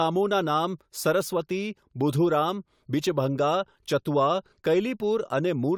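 No technical faults can be heard anywhere in the speech.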